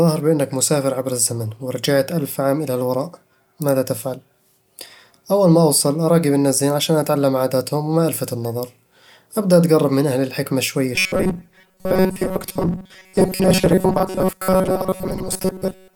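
Speech clip with robotic sound from repeated short buffers from 10.96 s to the end: a rigid metallic buzz at 188 Hz, most of the sound replaced by repeats, likely from a roughly 5.3 ms chunk looped. Unlike pitch shifting, the buzz pitch stays fixed.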